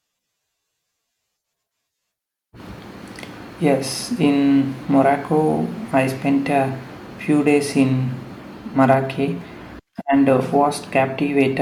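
Hard clipping appears in this speech clip from 8.82 to 8.94 s and again from 11.40 to 11.42 s. In both places the level briefly exceeds what one stage in the chain can pass, by about 2 dB and then about 1 dB, so the waveform peaks are sliced flat. Those squared-off tops generate high harmonics that were never in the source, heard as a short crackle on the loudest moments.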